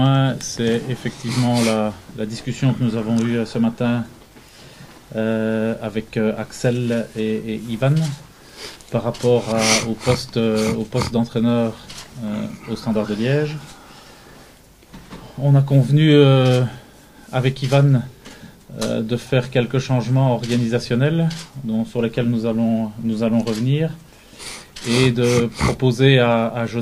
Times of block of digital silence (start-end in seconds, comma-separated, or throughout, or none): none